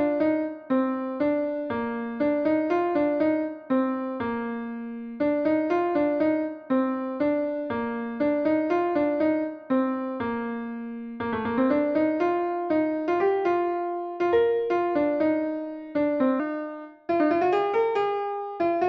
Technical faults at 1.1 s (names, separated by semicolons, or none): none